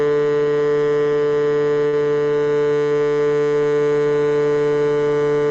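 At 1.87 s the music stalls briefly in a short stall from a late packet. A packet arrived late, the jitter buffer ran dry, and the receiver stretched the last sound for about 54 ms until the data caught up, resuming where it left off without losing anything. It sounds like a held smear with a slight buzz or dip until 1.95 s. On a spectrogram the harmonics run flat and unchanged across that span. The waveform shows a repeating cycle there. Everything after it arrives about 54 ms later.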